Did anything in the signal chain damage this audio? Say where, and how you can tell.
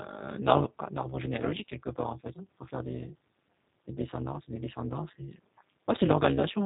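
Yes. There's an overlap-add ripple from a frame-based processing stage, running through the whole clip. The level dips by about 60 dB once a frame, around 200 times a second, so the sound gets a harsh robotic buzz. The frame overlap doesn't sum to constant gain.

The codec stage also did plainly audible damage, and it sounds like G.729. Nothing gets through above 3.8 kHz, and the speech has that rough, synthetic edge you get when the codec rebuilds it from a filter and a few pulses. That fits an 8 kbit/s VoIP link.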